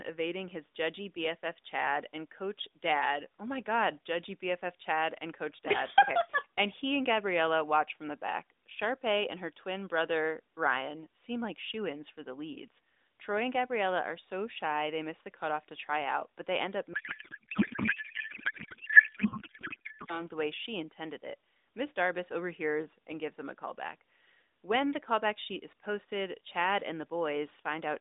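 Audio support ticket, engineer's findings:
Codec payload misread, 16.94 to 20.23 s. Speech drops out and is replaced by garbled noise and warble that barely tracks it. Looks like an RTP payload packing mismatch: sender packing AMR octet-aligned, receiver unpacking it as bandwidth-efficient, so every field lands in the wrong bits. The AMR-NB path either side sounds narrowband and lightly coded, fits the 12.2 kbps mode.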